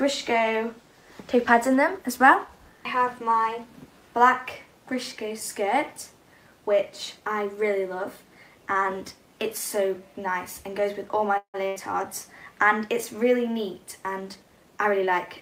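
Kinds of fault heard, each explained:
call audio freeze: From 11.37 to 11.56 s the sound stops advancing. The last fragment is stretched into a fading buzz that drops to silence for about 90 ms, which points most likely to packets held up in transit and an emptied jitter buffer. When playback resumes it continues exactly where it stopped, so about 164 ms of filler has been inserted, the delay grows by the same amount, and no audio is missing.
burst of packet loss: Shortly after, from 11.68 to 11.78 s, there is a short run of lost or late audio. The receiver covers roughly 80 ms by continuing the last sound and turning it down across the gap, so it comes out as a held buzz or a fading hiss. The audio then resumes further along, and about 80 ms of the original is gone rather than delayed.
jitter buffer speed-up: From 14.19 s to the end the audio runs at about 110 percent speed while its pitch stays unchanged. 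The receiver is shrinking an overfilled jitter buffer, plausibly the backlog from the earlier freeze. It does this by cutting many small pieces, each one or a few pitch periods long, so that around 150 ms is removed in total. The result sounds hurried and compressed in time.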